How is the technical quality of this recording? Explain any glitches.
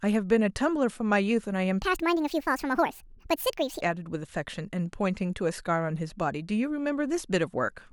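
The recording has one glitch, a section at the wrong speed. From 1.82 to 3.81 s the speech runs 1.58 times too fast, likely from playback against the wrong clock. The voice jumps up about seven semitones and hurries. Unlike a pure pitch shift, timing and pitch change together, then snap back.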